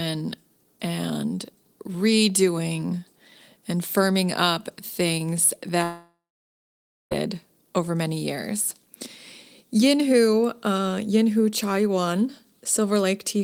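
Likely a long network dropout, 5.83 to 7.13 s: about 1.3 s never arrives after "and firming up things". A fading buzz turns to silence until "over many years".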